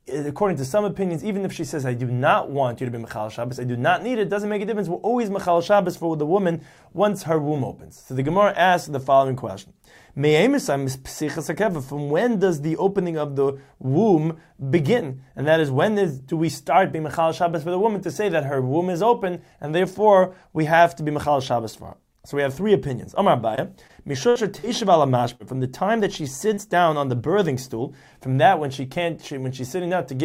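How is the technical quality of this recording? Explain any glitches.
The recording has a cluster of network dropouts between about 23.5 and 26.6 seconds.

Short concealed packet loss occurs at 23.55, 23.87, 24.59, 25.35 and 26.54 s. At each point a chunk of audio arrived too late to decode: about 20 ms at the first two and about 40 ms at the last three. The receiver filled each hole by extending the preceding sound, then crossfaded back into the real signal. Each gap comes across as a brief smear or wobble, and a very short sound can drop out entirely.

A burst of packet loss runs from 24.29 to 24.37 s. Here about 60 ms went missing in one run, which fits several consecutive packets failing to arrive in time. The concealment carried the last sound forward while fading it down, so the gap is heard as a held, decaying tone or hiss. The audio then resumes slightly further on, and the material in between is lost.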